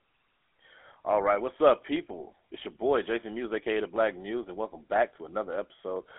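From start to finish the speech has a buzzy, gravelly roughness and a boxed-in, narrow tone, with nothing above 3.8 kHz. That is GSM full-rate codec damage: the coder rebuilds the voice from a vocal-tract model driven by sparse, regular pulses, which fits 13 kbps full-rate GSM.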